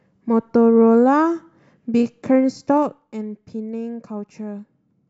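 A gain reduction in this speech clip is applied in coarse 2 dB jumps with no smoothing between them, producing zipper noise from 2.69 to 3.07 s. Around 20 steps a second pull the level down by roughly 10 dB, and each abrupt jump leaves a small click in the waveform. Together the clicks form a fast ticking, zipping texture riding on the speech for as long as the level is moving.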